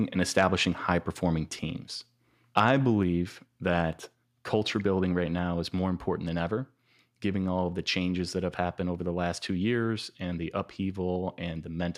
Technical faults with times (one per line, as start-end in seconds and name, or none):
2.57-2.60 microphone overload
5.13 microphone volume stepped down